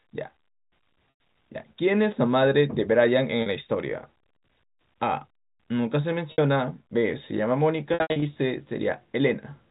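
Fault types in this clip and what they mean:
Packet loss with pitch repetition: audio went missing and the receiver bridged each gap by looping the last pitch period, fading it out over about 50 ms. The 40 ms gap at 3.42 s sounds like a held, buzzy tone. The 100 ms gap at 1.1 s fades to silence before a short cross-fade back. From 7.94 to 8.22 s, 200 ms drops out in runs up to 80 ms. The gap sizes fit 20 ms packets.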